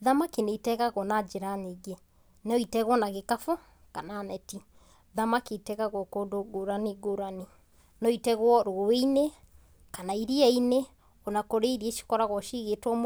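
No technical faults occur at any time in this speech.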